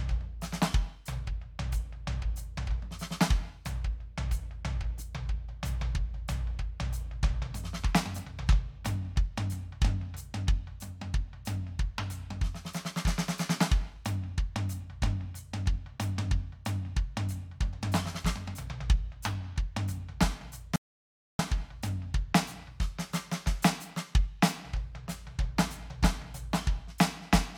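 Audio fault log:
20.76 to 21.39 s, audio dropout to silence: the music stops dead mid-phrase and resumes about 0.63 s later, with nothing at all in between, not even background hiss, so that stretch of the performance is simply missing. The likely cause is a brief loss of the input signal while recording continued and filled the gap with silence. On the waveform this shows as a flat line, and on the spectrogram as a clean vertical band of empty black across every frequency.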